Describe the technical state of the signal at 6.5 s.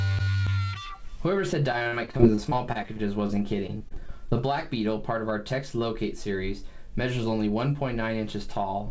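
At 6.5 s the signal is intact, with no dropout, glitch or distortion, only the band limit of the WebRTC call path, which leaves nothing above 8 kHz, consistent with G.722 wideband coding.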